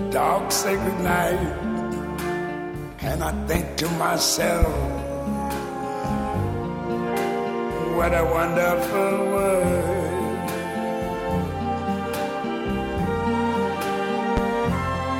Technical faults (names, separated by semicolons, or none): loud pop